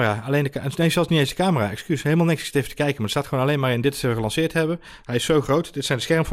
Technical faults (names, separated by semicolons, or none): DAB burbling